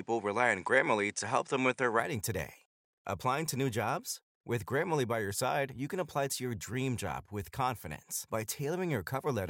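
Input switched to a poorer device, from 0.0 to 2.0 s of this speech clip: for the first two seconds the sound is duller and narrower, with nothing above 9.8 kHz, and a faint floor of background noise sits far below the speech, roughly 50 dB down. At 2.0 s the tone clears and the level shifts by around 5 dB, with no gap at the change. This likely reflects the recording starting on a lesser microphone or headset profile before switching to the main input.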